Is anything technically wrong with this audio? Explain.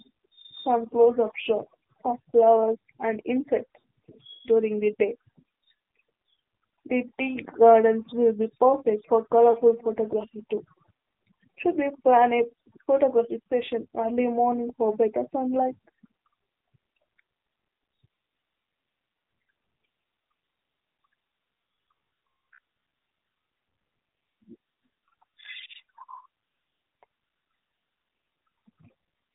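Yes, there are three kinds of fault.

Throughout, the AMR narrowband mobile codec is plainly audible. At a rate that fits 7.4 kbps, the speech is cut off above 4 kHz and the pulse-driven vocal tract model leaves it buzzy and synthetic. That buzziness runs through the whole clip, unlike the brief dropouts below.

Lost AMR speech frames occur twice. At 3.81 s, about 40 ms goes missing, which fits two 20 ms frames. At 9.52 s, between "perfect for" and "photography too", about 20 ms is lost. Each time, the decoder stretches the last good pitch and vocal tract settings while fading them down, so the sound dips and warbles briefly before recovering.

Robotic sound from repeated short buffers runs from 21.95 to 23.08 s. The speech becomes a rigid, metallic buzz at about 67 Hz that still loosely tracks the speech. This is likely caused by audio arriving too seldom, with the last 15 ms or so repeated and most of the real audio in that stretch skipped. 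The fixed buzz lasting over a second sets it apart from the short fading glitches of lost frames.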